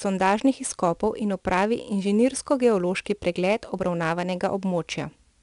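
4-bit ADPCM compression runs through the whole speech clip. Each sample is coded as a coarse 4-bit step from a prediction, so a gritty hiss tracks every loud syllable. Nothing sounds above 10.6 kHz, which fits a sample rate near 22 kHz.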